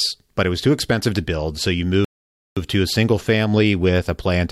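At 2.05 s the speech stops dead and stays silent until 2.57 s. This is a rebuffering stall. The player ran out of downloaded audio and waited for more. Playback then resumes at "to a single", losing nothing but adding about 0.52 s.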